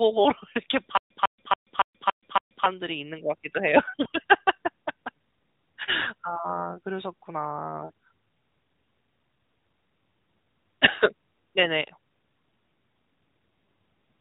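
From 0.97 to 2.66 s the speech falls into a stutter with silent gaps. A fragment of about 149 ms plays, then about 132 ms of flat digital silence follows, and the pair repeats six times at an even period of about 281 ms. The likely cause is a stalled player or stream that replays its last buffered chunk at each retry before running dry, so the speech that belonged in that span never arrives. On a waveform this appears as identical blocks separated by flat silent stretches. On a spectrogram it shows as a picket fence of repeated patterns with fully blank columns between them.

Lost AMR speech frames follow, heard against the light, band-limited quality of the AMR narrowband mobile codec, whose spectrogram stops sharply at 4 kHz because of its 8 kHz sampling; it runs in its 12.2 kbps mode. The first loss, at 4.04 to 4.08 s, is a single 20 ms frame and gives a brief dip or warble. Two longer losses of 40 ms each, at 6.02 to 6.08 s and 7.86 to 7.92 s, smear the sound as the decoder reuses its last good pitch and spectral settings at falling gain. 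In these gaps the spectrogram shows frozen, repeated harmonic stripes that fade, and the waveform shows an envelope that sags before the speech recovers.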